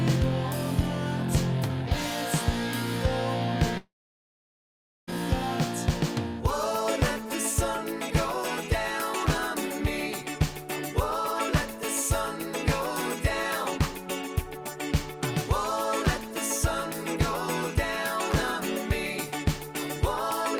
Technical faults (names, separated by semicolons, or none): long network dropout